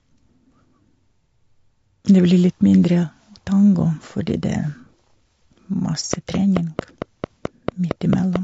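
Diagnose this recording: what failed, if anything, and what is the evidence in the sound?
Low-delay AAC compression throughout: the speech sounds rough and grainy, with noise between harmonics. This points to a codec stage, likely AAC-ELD's short frames at around 32 kbps.

Train of clicks from 6.14 to 8.37 s: about ten evenly spaced clicks at 4.5 per second, peaking roughly 10 dB above the speech. They point to the analogue wiring or converter stage, where nearby interference or a struggling interface injects repeated pulses.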